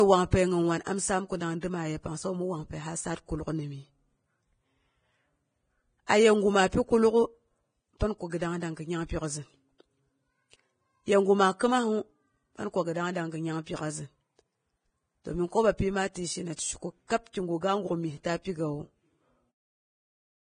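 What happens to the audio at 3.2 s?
At 3.2 s the speech carries the heavy artefacts of Vorbis compression that run through the whole clip, likely from low-quality encoding. A smooth spectral floor is kept while the treble residue is quantised so coarsely that fine detail turns into noise, which fits a bitrate near 21 kbps. The result sounds hissy and grainy, with roughened tones and blurred attacks. A spectrogram shows a hard ceiling at about 9.7 kHz and speckled, smeared energy just below it.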